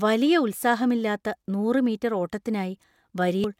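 At 3.44 to 3.47 s, near the end of the clip, damaged data in the compressed stream produces a brief glitch lasting about 30 ms. The decoder misreads the corrupted frames, loses sync, and resumes at the next valid frame header.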